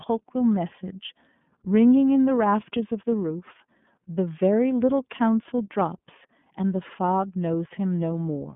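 Throughout, the speech carries iLBC codec damage: band-limited to roughly 150 Hz–3.5 kHz, with a plainly rough, synthetic texture consistent with 30 ms independently coded frames.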